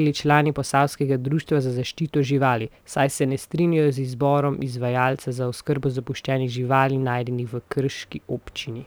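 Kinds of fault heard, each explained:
Sample clock jitter: the converter's clock wanders, so each sample is captured a little early or late, here by roughly 3 microseconds, and the error is worst where the waveform moves fastest. Throughout the speech a rough hiss sits about 35 dB under the signal, swelling on loud passages and sibilants and vanishing in pauses, which separates it from a steady noise floor that stays audible in silence.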